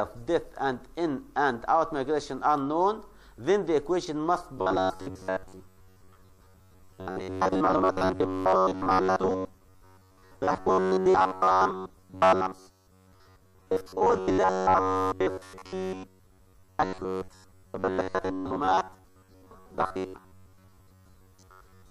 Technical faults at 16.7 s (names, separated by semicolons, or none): robotic sound from repeated short buffers